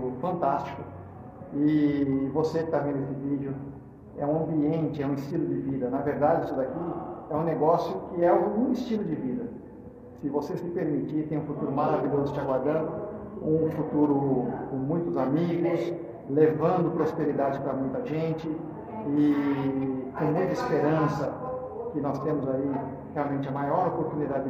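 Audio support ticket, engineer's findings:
Brief digital blip at 10.29 s, roughly 14 ms. Component: decoder input. Damaged data in the compressed stream; the decoder misreads the affected frame, loses sync, then locks onto the next valid frame header and resumes.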